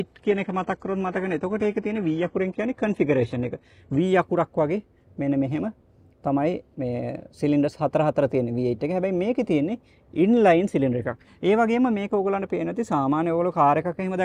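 For the first 4 seconds the sound is dull, with thin synthetic treble, then sharpens abruptly without a gap: an adaptive stream starting at a low bitrate, which fits roughly 16 kbit/s HE-AAC stepping to 96 kbit/s AAC-LC.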